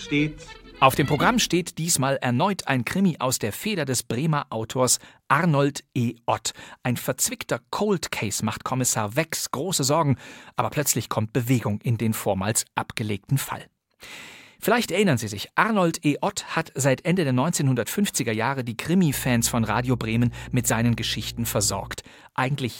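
Around 19.13 s a mains hum creeps in and sits there until about 21.94 s: a steady 60 Hz drone with a few low harmonics, fairly prominent against the sound. That's power-line energy leaking into the signal, probably from a ground loop or a nearby transformer.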